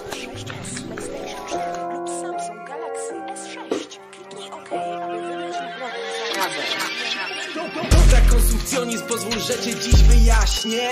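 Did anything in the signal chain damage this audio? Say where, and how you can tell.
No, nothing along the chain left a mark I can hear, so there's no damaged stage to point to.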